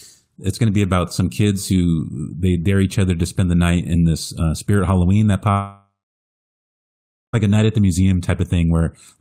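At 5.51 s the speech breaks into a continuation of the last sound, which quickly fades. Silence fills about 1.4 s. Speech resumes at 7.35 s with "a night at the". Roughly 1.8 s never arrives. This is likely a long network dropout.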